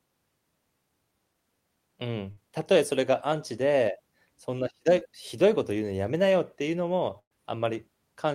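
At 2.31 to 2.39 s the speech smears into a held, fading sound for about 54 ms and then jumps ahead. At 7.19 to 7.33 s the same happens for about 115 ms, ending in roughly 80 ms of silence. Both are bursts of packet loss: 60 ms and 120 ms of audio never arrived, so the receiver stretched the last sound and faded it.

Between 4.99 and 5.03 s there is a brief wobble of about 22 ms. This is short concealed packet loss. About 20 ms went missing, and the decoder briefly continued the preceding sound before blending back into the real signal.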